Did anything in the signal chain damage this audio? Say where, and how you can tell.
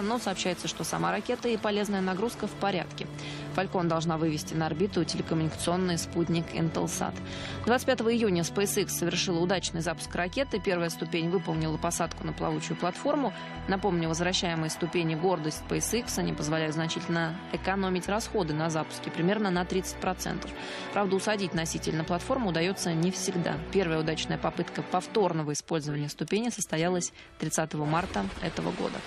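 No, nothing in the signal chain damaged this audio.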